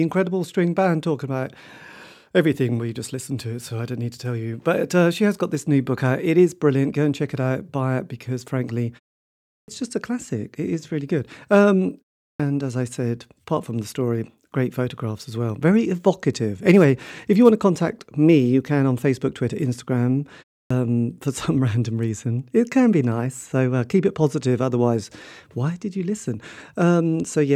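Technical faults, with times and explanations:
9.62 s, 12.34 s and 20.65 s: clipped start after a pause. Each time speech resumes after a short silence (0.71 s, 0.39 s and 0.3 s), the opening of the first sound is missing, about 60 ms, 56 ms and 55 ms respectively, so the speech begins abruptly without its onset. The output path mutes during pauses, and when sound returns it needs those few tens of milliseconds to wake before audio passes again.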